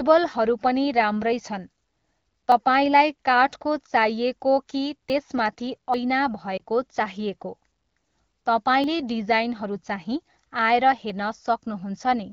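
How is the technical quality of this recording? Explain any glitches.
The recording has two kinds of glitch: five skips, and one brief warble in the speech, all heard over a wideband AMR phone-call sound whose clarity fits the 12.65 kbit/s mode.

Dropped buffer (overrun), at 2.52, 5.1, 5.94, 8.84 and 11.1 s: the likely cause is the software failing to read its audio before the hardware overwrote it. The surviving pieces are butted together, so each is a jump ahead. Most lose a few tens of milliseconds, and the one at 5.94 s is the longest.

Lost AMR speech frames, from 6.57 to 6.61 s: about 20 ms of speech failed its error check, which points to a single lost frame. The decoder refilled the gap from the previous frame's settings at reduced level, giving a short dip or warble before normal sound resumes.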